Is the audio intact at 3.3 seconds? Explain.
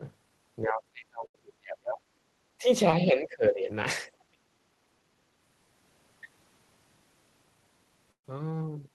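No. At 3.3 seconds the speech sags sharply in level, falling by something like 20 dB at its deepest and thinning or breaking up in patches, within a span from 3.05 to 3.69 s, about half a second of it affected. This is speech suppressed in double talk, likely caused by an echo canceller that could not tell the near talker apart from loudspeaker echo while both ends were speaking, so it attenuated everything together.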